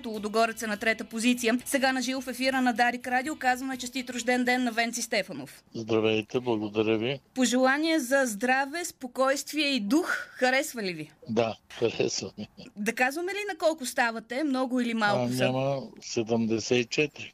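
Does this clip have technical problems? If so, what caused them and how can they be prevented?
No, this clip does not have technical problems, so there is nothing that needs preventing.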